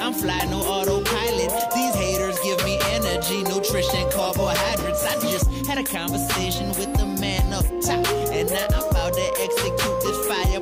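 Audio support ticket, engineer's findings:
Nothing stood out on listening; no symptoms to log for this ticket.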